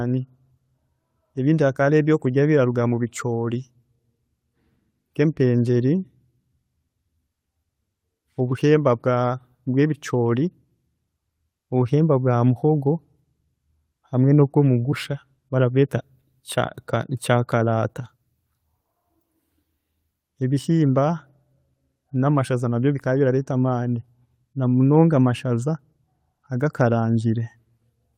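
No technical faults are audible anywhere in this speech recording.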